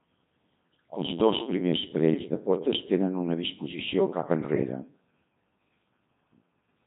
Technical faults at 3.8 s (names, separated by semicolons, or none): Codec 2 vocoder